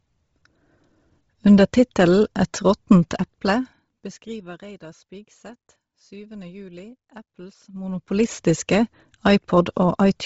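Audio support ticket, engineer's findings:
Bluetooth LC3 compression, throughout the clip. The speech has a breathy, grainy edge and nothing above 7.8 kHz. The likely cause is a low-bitrate LC3 link dropping upper spectral bins and noise-filling them, consistent with about 24 kbps, 7.5 ms frames.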